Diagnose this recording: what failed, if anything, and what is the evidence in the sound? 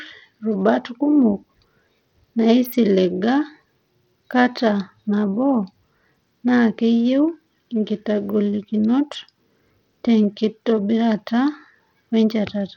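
The codec stage is the likely culprit: Bluetooth SBC compression running short of bits, which fits a bitrate near 80 kbps. Throughout the speech, the treble thins and flickers as upper sub-bands go unfunded, while coarse quantisation lays a gritty, aliased edge over everything.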